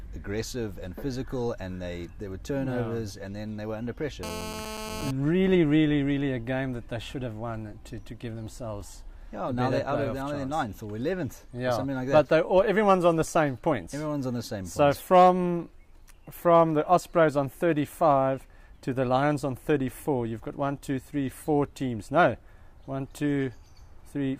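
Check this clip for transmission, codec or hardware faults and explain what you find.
There is one fault: GSM phone buzz, from 4.23 to 5.11 s. A nearby 2G phone transmits in bursts 217 times a second. The audio circuit rectifies these pulses. The result is a hard, raspy, steady buzz, rich in harmonics, about 10 dB below the signal.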